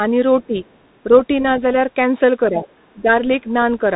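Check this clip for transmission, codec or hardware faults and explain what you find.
Three kinds of fault are present: a narrowband headset codec throughout, a faint second voice at times, and brief dips in the main speech.

Bluetooth CVSD headset codec, whole clip: one-bit up/down coding with an adapting step leaves nothing above 3.8 kHz. The spectrogram shows a hard ceiling, sibilants turn scratchy, and granular hiss sits underneath.

Other side's voice leaking through, 0.41–0.97 s (about 40 dB down), 1.14–1.23 s and 2.64–2.92 s (about 25 dB down): likely residual loudspeaker echo, showing as faint, separate harmonic traces.

Speech suppressed in double talk, 0.47–0.57 s, 2.50–2.64 s and 2.94–3.07 s: the level drops by roughly 15, 5 and 10 dB, likely from the echo canceller turning down both voices. The waveform shows short notches in the envelope.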